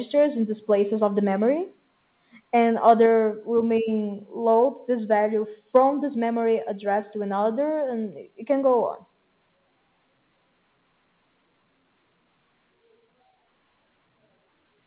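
At 2.88 to 2.91 s a peak crackles harshly, its tops flattened about 1 dB past the converter's limit. This is likely microphone overload, confined to that peak unlike steady codec grit. At 3.06 s the sound and background drop together by about 3 dB and stay there, likely the microphone volume stepped down in a single step rather than a gradual fade.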